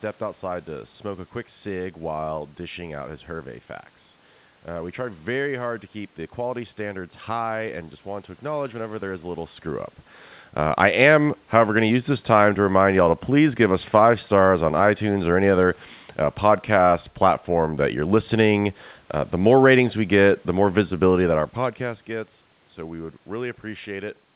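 No technical faults can be heard anywhere in the recording. The speech has passed through a call path that leaves nothing above 4 kHz, which fits G.711 A-law telephone coding, and the background room noise and the level shifts as the talker moves at around 9.5 s and 21 s belong to the recording itself.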